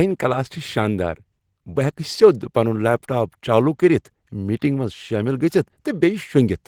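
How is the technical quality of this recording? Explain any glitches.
The recording's quality is limited by one fault that runs through all of the speech: Opus voice compression, with plainly audible coding damage from start to finish.

Throughout the clip, the speech has a hoarse, slightly robotic grain, which fits Opus at around 16 kbps in hybrid mode with 20 ms frames. In this mode a linear-prediction SILK layer carries the band below 8 kHz and a CELT layer covers the top up to about 20 kHz. At that rate the excitation is coded coarsely, roughening the voiced sound.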